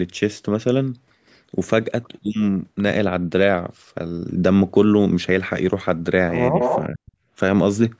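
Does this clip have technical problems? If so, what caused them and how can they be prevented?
Yes. From 6.59 to 6.84 s there is an echo leak. A delayed copy of the speech trails the original by about 181 ms. It is loud, only a few decibels below the speech itself. The likely cause is a far end playing the call on a loudspeaker. Its echo canceller failed to remove what its microphone picked up, so the sound returned. Using a headset or improving the echo canceller's adaptation at the far end would prevent it.

From 6.89 to 7.13 s the speech is suppressed in double talk. The speech drops sharply, by a very large amount at its deepest, and is affected over about a fifth of a second. This likely happened because both sides spoke at once. The echo canceller could not tell the local talker from the loudspeaker echo, so it turned everything down. Reducing echo at its source with headsets, or using a canceller that handles double talk better, would prevent it.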